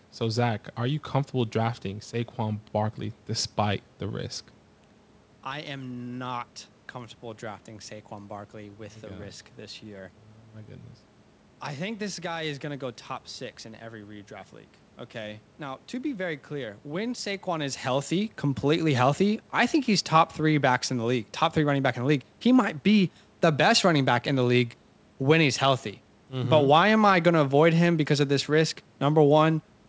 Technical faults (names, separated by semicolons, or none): none